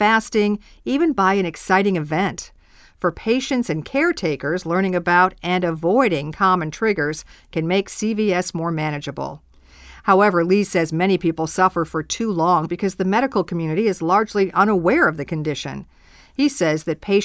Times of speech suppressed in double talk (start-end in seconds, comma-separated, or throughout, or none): none